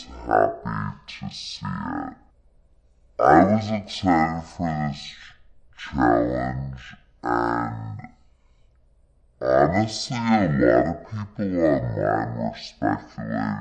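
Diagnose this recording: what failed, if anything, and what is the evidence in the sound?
Wrong sample rate at playback: the speech runs at half speed and an octave low throughout, which fits 48 kHz audio played at 24 kHz.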